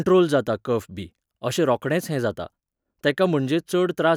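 Nothing in the speech stood out as a technical problem on listening.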